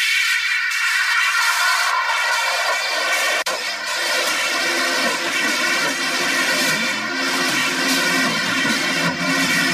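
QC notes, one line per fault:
Nothing stood out on listening; the sound held steady with no audible problem at any point.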